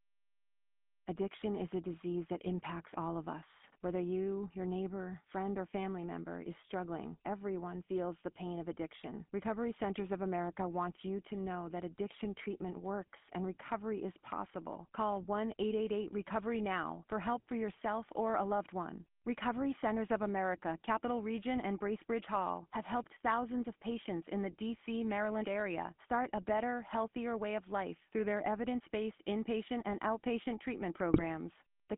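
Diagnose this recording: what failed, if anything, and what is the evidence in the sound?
GSM full-rate codec, throughout the 32 s of speech, a codec-stage fault. The speech has the plainly audible buzzy, gravelly roughness of a vocal-tract model driven by a regular pulse excitation that keeps only a third of its samples. The band runs from 150 Hz to 3.4 kHz, a telephone line's limits, and the texture fits the 13 kbps full-rate coder.

GSM bit errors, from 31.14 to 31.24 s, just after "inpatient and outpatient treatment", a network-stage fault. For about 100 ms the decoded speech breaks into squawks, pops and gargling. Corrupted bits on a weak radio link reached the decoder, bending the synthesis filter, pitch or gain values so the spectrum warps or the level jumps. The length of the burst points to around five consecutive 20 ms frames being damaged.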